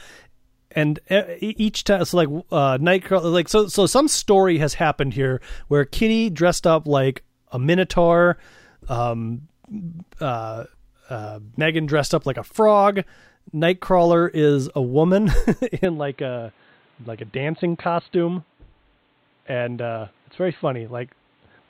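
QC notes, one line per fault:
15.85–21.70 s, input switched to a poorer device: the speech turns dull and boxy with no gap, nothing above 4.3 kHz, about 5 dB quieter, over a faint new noise floor. This is likely a mid-recording change to a narrower-band microphone or headset profile.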